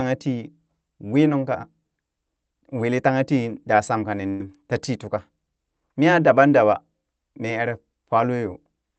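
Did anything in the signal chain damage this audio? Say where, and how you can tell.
Yes. The damage happens at the network stage, as a burst of packet loss from 4.29 to 4.44 s, between "daa sham kani" and "tatii tuka". For about 100 ms the receiver stretches the last sound into a fading buzz. Then speech resumes with a stretch missing.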